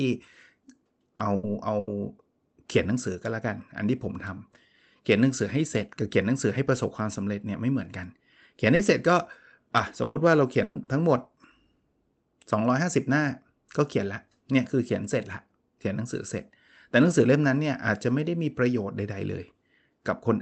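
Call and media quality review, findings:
Short concealed packet loss at 1.15–1.22 s, 8.75–8.82 s and 10.83–10.90 s. Brief smear or wobble each time, roughly 40 ms patched over. Jitter buffer / decoder side: the audio arrived too late, so the receiver extended the preceding sound from its pitch or as shaped noise, then crossfaded back to the real signal. A quick consonant can drop out.

Burst of packet loss at 1.35–1.46 s and 1.79–1.90 s (80 ms filled each), and at 10.03–10.18 s and 10.63–10.78 s (120 ms each). Held buzz or fading hiss, then the speech jumps ahead. Same receive path: several lost or late packets in a row, covered by extending the last sound and fading it down. No true silence in the gaps, and the real audio for that stretch is gone. The two longer bursts plus the 10.83 s glitch cluster around 10–11 s, so that's the worst patch.

The high end of the call audio tops out around 8 kHz, which fits Opus at a fairly low bitrate.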